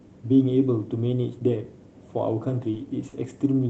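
Speech carried over a call codec, with two short stalls from late packets, at 2.71–2.76 s and 3.09–3.15 s. Each time, the jitter buffer ran empty and stretched the last sound by 20 ms and then 30 ms before resuming. Unlike a dropout, nothing is cut out; sound is held too long.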